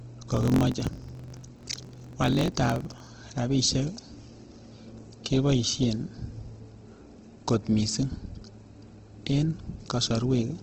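From the start the speech sounds grainy and rough, its tones turned noisy rather than swirling, with plainly audible codec damage and nothing above about 8 kHz. That narrowed, wideband-limited band and the noise-filled texture point to Opus compression, likely in its CELT music mode at a low rate around 16 kbps. Bands short of bits are refilled with folded or noisy content instead of being left empty.

From 0.30 to 3.07 s a steady buzz near 45.9 Hz rides on the speech, and it hurries along about 1.07 times faster while its timbre stays the same. This is a block size mismatch (truncated). One stage hands over longer blocks than the next accepts, and each block's tail is discarded. The buzz rate fits 1024-sample blocks being cut short, and the dropped material accounts for the speed-up.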